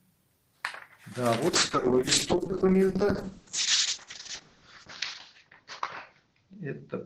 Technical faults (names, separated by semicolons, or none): call bitrate drop